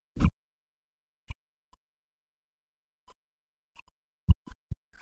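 From the very start and through to the end at about 5 s, the speech keeps dipping, thinning and breaking into pieces, with its level at times falling by something like 40 dB before recovering. This is speech suppressed in double talk, likely because the echo canceller could not tell the talker apart from the loudspeaker echo while both sides spoke, and so attenuated everything. On a waveform the envelope shows sudden collapses and chopped gaps. A spectrogram shows the harmonics fading or vanishing in patches, with the upper bands going first, all below the call path's 8 kHz ceiling.

Between 0.22 and 0.29 s, a brief scrap of a second voice sits underneath, about 25 dB below the talker. This is the other side's voice leaking through, likely residual loudspeaker echo that the canceller failed to fully remove from the microphone signal. It lasts only around 70 ms. On a spectrogram it appears as a faint, short smear of harmonic energy that does not line up with the main talker's pitch track. 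On the waveform it is barely visible beneath the talker's envelope.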